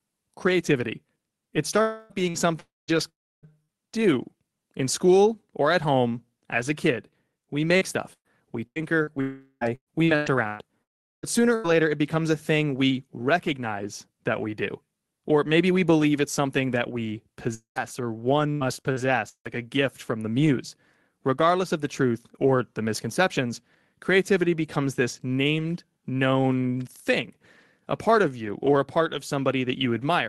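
Speech over an Opus call link, with the top end stopping around 12 kHz. The main fault is a series of long network dropouts. Each is likely a stall in packet arrival. They fall at 1.81–2.13 s, 2.60–2.91 s, 3.09–3.46 s (just before "do in school or"), 9.21–9.64 s, 10.83–11.26 s and 17.55–17.79 s (right after "it's something that we"). Each loses 220 to 400 ms. The last sound is stretched into a fading buzz or hiss. In most of them it decays to near silence, and speech resumes with that stretch gone. Four single lost packets were rebuilt from error correction, at 2.10, 2.34, 2.88 and 3.43 s. Each covers 20 ms, mostly at the end of a gap. There is no hole there, but those frames sound rougher and noisier than their neighbours. A short concealed packet loss at 2.30–2.37 s drops 40 ms. The decoder bridges it by extending the previous sound, giving a quick smear. A burst of packet loss at 3.63–3.71 s removes about 60 ms. 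The last sound is carried on and faded out before speech picks up again. Repeated packet loss makes the sound robotic over 7.77–11.68 s and 17.76–19.47 s. The first stretch has nine gaps, the longest 121 ms. The second has four, the longest 156 ms. About a fifth of each stretch is patched-in sound, so the speech turns choppy, with pieces missing.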